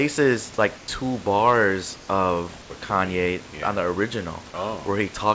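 From 0.78 to 0.88 s and again from 1.96 to 2.08 s, the room background, sitting about 23 dB below the speech, gives way to comfort noise in place of the background: a flat, textureless hiss about 2 dB and then about 3 dB quieter, lasting 100 ms and 120 ms. The likely cause is discontinuous transmission, with the receiver synthesising noise during the gaps. At 2.62 to 2.70 s, 80 ms is replaced by the same steady noise, and roughly 30 ms of speech is lost. This is sound dropped by the voice detector, likely because the sender took part of the speech for background. Throughout, nothing is present above 8 kHz, which fits a G.722 call path.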